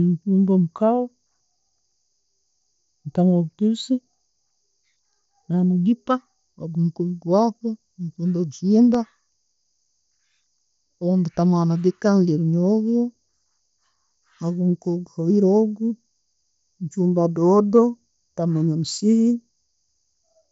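CD scratch ticks occur from 8.69 to 9.32 s as six brief clicks, the longest around a millisecond. A blemish passes the pickup once per disc turn, destroying more data than error correction can rebuild, so the player patches or mutes those samples. The speech, carried over an mSBC headset link, stops near 7.7 kHz.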